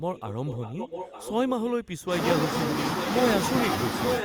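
A speech clip with echo leak, most likely from a far end playing the call over a loudspeaker whose echo canceller let part of the microphone pickup return down the line. The result is a copy of the speech trailing it by about 0.89 s, sitting roughly 10 dB down from 0.14 to 1.87 s and again from 3.0 to 3.21 s, then rising to about the level of the speech itself from 4.13 s to the end.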